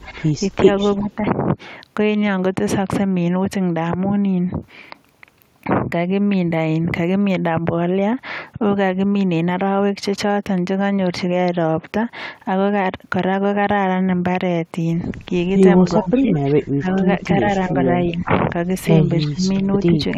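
Speech suppressed in double talk at 0.04, 0.99, 15.99, 17.19, 17.68, 18.11, 19.27 and 19.86 s: the talker dips briefly, deepest near 16 and 19.3 s, likely an echo canceller ducking overlapping speech.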